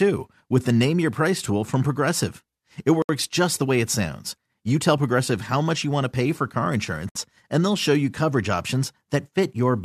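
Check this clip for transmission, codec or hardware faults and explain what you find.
There are two gaps at joins of encoded pieces, four seconds apart.

At 3.02 to 3.09 s, just before "just the way it", and at 7.09 to 7.15 s, between "to pay for car" and "and they'll show you": separately encoded pieces were joined untrimmed, leaving encoder delay and last-frame padding. The speech drops into a gap of 69 ms, then about 64 ms, with smeared edges, and resumes where it stopped.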